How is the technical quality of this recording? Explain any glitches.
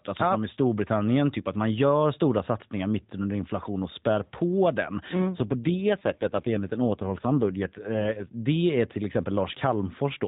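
The recording is narrowband mobile speech, band-limited at 4 kHz in the way AMR-NB coding leaves it, with light codec roughness throughout, and it has one clear glitch. From 5.16 to 8.44 s there is an AMR rate drop. The bandwidth stays the same and there is no gap, but the voice turns rougher, buzzier and more synthetic. That points to the network pushing the codec from its 12.2 kbps mode down to about 5.9 kbps to free bits for error protection on a weak radio link. Fewer bits per 20 ms frame means a cruder vocal-tract model, which is what produces the harsher sound. Quality recovers at 8.44 s, when the higher rate returns.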